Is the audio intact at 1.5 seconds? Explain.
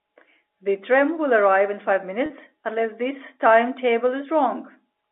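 Yes, at 1.5 seconds the speech is intact, with nothing interrupting or damaging it beyond the narrow band of G.711 telephone coding, which keeps roughly 300 Hz to 3.6 kHz.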